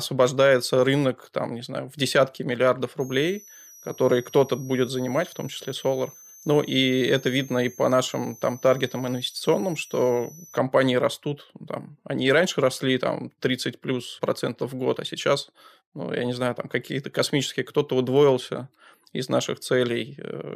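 From 3.00 s to 10.58 s, between "знаю в десятки миллиардов" and "растут ну там они", a thin whistle sits well below the speech, drifting between 5.7 and 6.5 kHz. This is switching supply whistle: a power supply cycling audibly as its load shifts.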